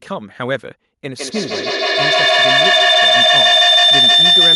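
From 1.03 s to the end, feedback howl builds near 4 kHz, peaking about 12 dB above the speech. It repeats roughly every 150 ms as the loop keeps growing.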